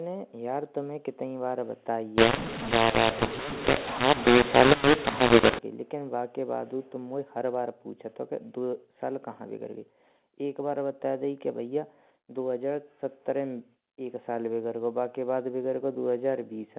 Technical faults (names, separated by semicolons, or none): mu-law and A-law mixed up